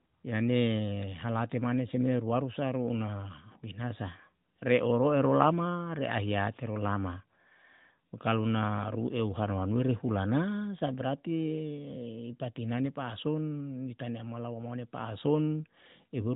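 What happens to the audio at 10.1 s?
At 10.1 s the speech carries on intact, with no break, click or distortion, just the steady narrowband sound of the AMR narrowband mobile codec, with nothing above 4 kHz.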